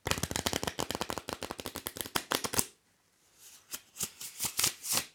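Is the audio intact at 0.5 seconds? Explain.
Yes, the audio is intact at 0.5 seconds, with no dropout, click, distortion or other fault audible at that point.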